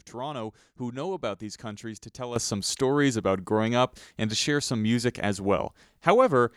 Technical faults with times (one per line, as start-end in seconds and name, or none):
2.36-6.57 sudden gain jump